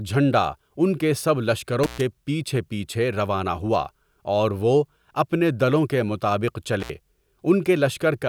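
A speech recording with two intermittent contact dropouts, at 1.83 to 2.01 s and 6.80 to 6.90 s. A loose cable or plug briefly breaks the signal path, opening for about 122 ms and 66 ms, so the audio cuts to faint hiss, with crackle where the connection opens and closes.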